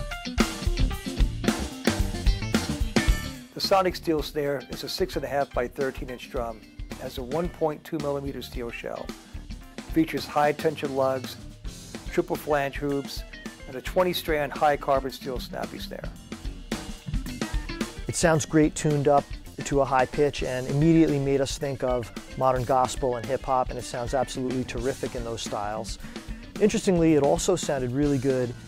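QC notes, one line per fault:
1.97–2.00 s: corrupt frame decoded. Damaged bits in a couple of compressed frames were played anyway. Misread gains or codes put energy at wrong frequencies for about 22 ms. The error peaks near -25 dBFS.
10.56 s: corrupt frame decoded. A single bad frame was decoded as is, giving a brief misplaced burst. Its error sits around -45 dBFS, far lower than the others.
21.09 s: corrupt frame decoded. About two frames were hit, and the error reaches roughly -25 dBFS.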